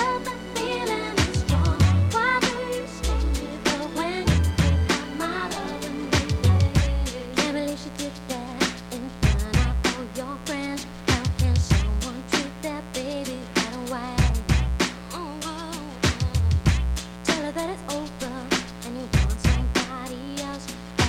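A steady, raspy mains buzz runs through the whole audio, roughly 15 dB below it, built from 60 Hz harmonics that switching spikes from a dimmer, rectifier or missing shield drive into kilohertz territory.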